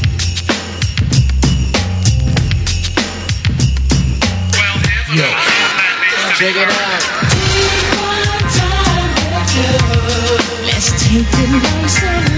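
Gain pumping runs through the whole clip, with the gain swinging by something like 10 dB. Loud and quiet stretches land unnaturally close in level, so the sound comes across squashed. The likely cause is microphone gain set far too high, with a fast limiter or compressor clamping down on every peak. The call's mic processing trims the deepest bass, and nothing comes through above 8 kHz.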